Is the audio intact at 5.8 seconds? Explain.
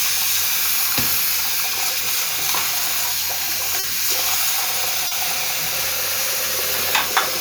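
Yes, at 5.8 seconds the audio is intact, with no fault to be heard at that moment.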